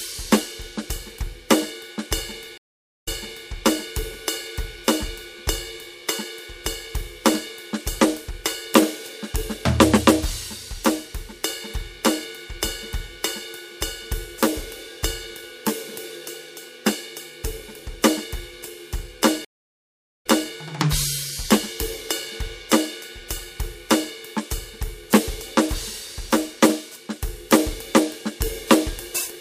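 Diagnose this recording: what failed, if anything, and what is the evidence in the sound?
The music drops out twice, at 2.58 s for 0.49 s and at 19.45 s for 0.8 s, then resumes slightly behind, repeating 0.44 s and 0.26 s. This is a network stream reconnect: the connection broke, a fresh decoder restarted mid-stream, and the server resent earlier audio.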